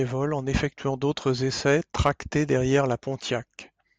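A gain stage is driven past its ceiling from 1.68 to 2.10 s, by about 3 dB, and again at 2.74 s, by about 2 dB. This hard clipping flattens the speech peaks, adding high harmonics heard as a gritty crackle on the loudest moments.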